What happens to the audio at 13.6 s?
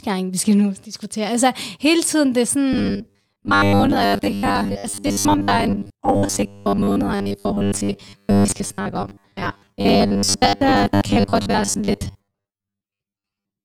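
At 13.6 s the speech is still a rigid, metallic buzz pitched at 100 Hz that only loosely tracks the speech, as it has been since 2.73 s; the robotic sound from repeated short buffers continues to the end of the clip. The likely cause is new audio arriving too seldom, so the software keeps looping the most recent short chunk, most of the time, while real audio is skipped. A 100 Hz buzz fits a repeated buffer about 10 ms long.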